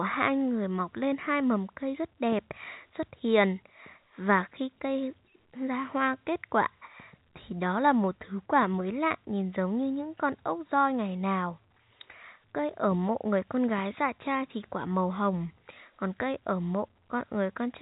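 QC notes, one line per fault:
Nothing stood out on listening to this speech, heard through the narrow band of G.711 telephone coding.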